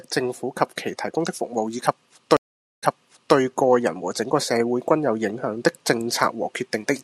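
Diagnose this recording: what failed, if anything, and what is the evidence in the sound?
The network stage failed with a stream reconnect. After "以及" the sound goes silent at 2.37 s for 0.46 s. It resumes 0.53 s earlier, repeating material before "個人和整" by 3.36 s. The connection dropped. The player rejoined, and a fresh decoder restarted on a resent burst.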